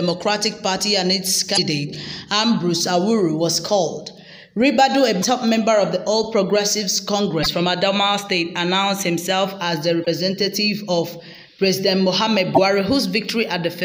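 Damaged data in a compressed stream at 1.53, 5.19, 7.41, 10.02 and 12.53 s, each about 0.06 s long: corrupted bytes make the decoder misread frames and lose sync until it finds the next valid header, heard as a brief chirp, squawk, click or short hole.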